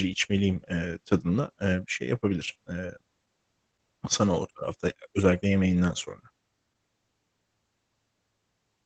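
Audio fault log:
Throughout: Opus voice compression. The speech sounds muffled, hoarse and faintly robotic because the band is cut off and the linear-prediction coder codes the excitation coarsely, which fits a stream of about 12 kbps. A spectrogram shows an empty band above 9 kHz and grainy, smeared harmonics below it.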